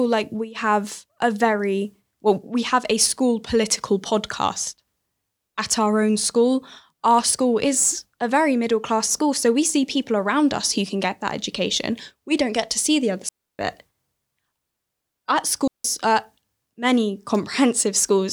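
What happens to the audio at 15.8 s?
At 15.8 s the speech cuts out in a digital wireless dropout from 15.68 to 15.85 s. The receiver lost too much data and muted for about 169 ms. It leaves a clean hole of near silence, with no noise burst on either side, just before "uh many".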